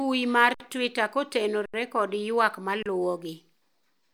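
At 0.54 s, 1.66 s and 2.83 s the speech freezes for 57, 80 and 31 ms: an underrun with held sample. The output buffer emptied, the converter held its last value, and the waveform sat flat and silent. Playback then resumed where it stopped, so each restart is soft.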